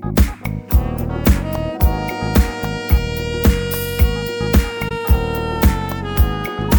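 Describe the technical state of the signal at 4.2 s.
At 4.2 s the signal is intact, with no dropout, distortion, or other technical fault audible at that point.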